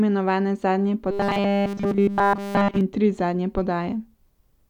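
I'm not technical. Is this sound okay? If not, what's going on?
No. From 1.11 to 2.81 s, just after "imenovane zadnje" and before "in tri zadnje", the speech becomes a robotic sound from repeated short buffers: a rigid metallic buzz near 200 Hz. The likely cause is audio arriving too slowly, so every 5 ms fragment gets replayed.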